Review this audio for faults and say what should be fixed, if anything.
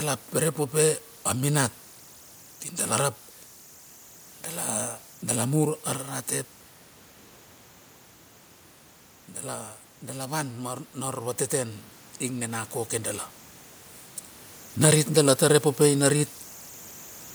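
Running right through the speech there's a whistle around 7 kHz with a grainy haze under quiet passages. Those are converter idle tones: the delta-sigma converter isn't dithered, so at low input it settles into repeating bit patterns, here only about 27 dB below the signal. Adding dither at the converter, or enabling its built-in dither, would break those patterns up.

Between 10.23 and 13.28 s the speech and the room behind it swell together by about 6 dB over roughly three seconds. That's automatic gain rising: the AGC decided the input was too quiet and slowly cranked its gain. Setting a fixed input gain and turning the AGC off would stop it.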